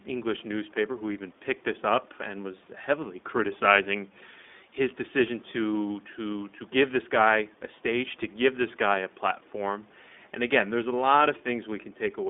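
Speech coded throughout with the iLBC codec: the band is limited to roughly 200 Hz to 3.6 kHz, and the rough, synthetic texture fits independently coded 20 ms frames at 15.2 kbps. Room noise sits about 36 dB below the speech.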